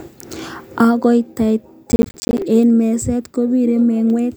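From 1.92 to 2.42 s the speech picks up a half-second burst of processor overload crackle. The processor evidently fell behind and kept missing its buffer deadlines back to back, and each miss dropped in a short hole of silence with hard edges. The grit and spacing of the ticks fit buffers of around 10 ms, with something like twenty of them lost, so you hear a rough tearing over the speech until it clears at 2.42 s.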